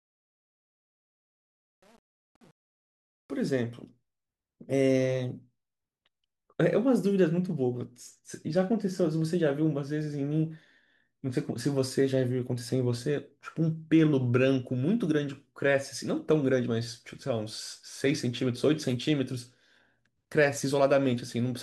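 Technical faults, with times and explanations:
0.00–3.51 s: truncation distortion on a fade. The fade-in is rounded without dither, which fits a stage keeping about 8 bits, so until 3.27 s the quiet speech becomes square steps and sounds gritty. Unlike gate chatter, the grit eases as the level rises.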